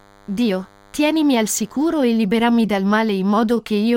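Speech carrying DECT cordless phone buzz from 0 to 2.0 s, before "e liberami dal": a thin 100 Hz rectified-burst drone well below the speech, drawn as evenly spaced harmonic lines on a spectrogram.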